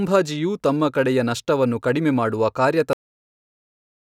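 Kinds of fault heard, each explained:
Cut-off end: The speech stops abruptly at 2.93 s, partway through a sound. The final stretch of audio was apparently never written out or played. There is no fade or natural decay. It drops straight to digital silence, which fills the remaining 1.25 s.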